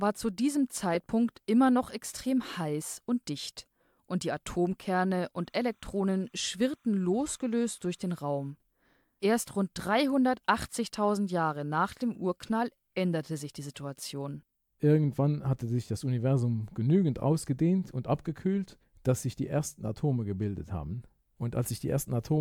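From 5.36 to 8.50 s, timecode bleed: linear timecode leaking from an adjacent line adds a faint chirping warble near 1 and 2 kHz.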